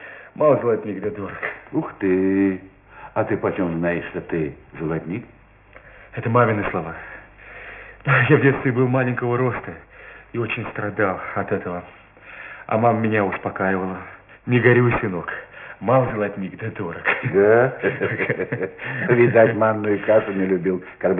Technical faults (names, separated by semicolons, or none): aliasing